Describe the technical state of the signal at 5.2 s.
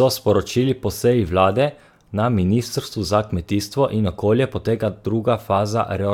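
At 5.2 s the speech signal is intact, with no audible technical fault at that point.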